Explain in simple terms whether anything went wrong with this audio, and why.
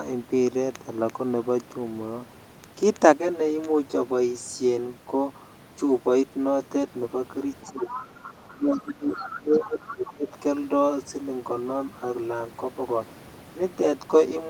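Yes, a few things went wrong. From about 3.15 s to the end there's channel delay (comb filtering): one channel runs roughly 10 ms behind the other, and when they're mixed together the overlap cancels at regularly spaced pitches. The speech goes hollow and phasey, a bit like talking down a tube.

Next there's the other side's voice leaking through, in short faint scraps at 7.62–8.06, 8.23–8.54, 8.75–8.88, 9.11–9.35, 9.55–9.68 and 9.84–10.06 s. It's likely the far-end caller coming out of the talker's loudspeaker and not fully removed by the echo canceller.

Overlapping that, the speech is suppressed in double talk: the main voice dips sharply from 7.7 to 7.99 s and again, for longer, from 8.52 to 10.3 s. Both sides were likely talking at once, so the echo canceller turned everything down, including the person you actually want to hear.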